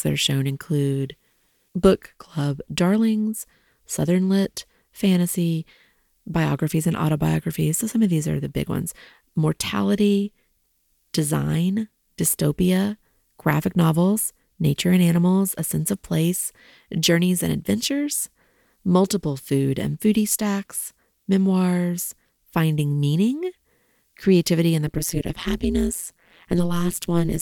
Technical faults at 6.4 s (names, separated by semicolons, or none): none